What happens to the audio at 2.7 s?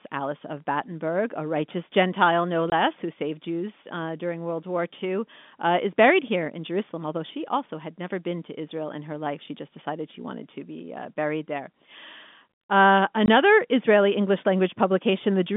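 At 2.70 s the audio drops out for 20 ms, until 2.72 s, just before "who saved". This is packet loss filled with silence. A stretch of the stream never arrived, and the receiver played silence in its place instead of concealing the gap. The 20 ms hole fits a single lost packet. The signal is cut off abruptly at both ends, so the gap is heard as a brief hole in the narrow telephone-band (G.711) speech.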